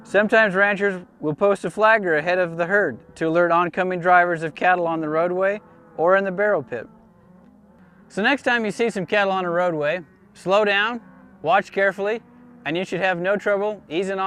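No technical fault can be heard anywhere in this audio. Nothing in the sound points to a problem in how it was captured, processed or delivered.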